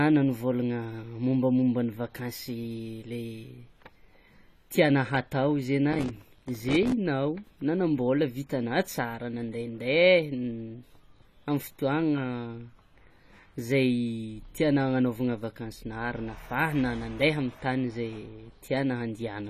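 Processor overload crackle runs from 5.91 to 6.92 s in this speech recording. Dozens of buffers, each only a few milliseconds long, miss their deadline. Every miss drops in a hard-edged gap of silence, and together they make a gritty tearing that stops once the load eases. Throughout the clip the sound is dull and smeared, with a watery fizz on sibilants and nothing above 14.1 kHz. That points to AAC compression, likely AAC-LC at a low bitrate around 32 kbps, where coarse quantisation against the hearing model leaves spectral holes.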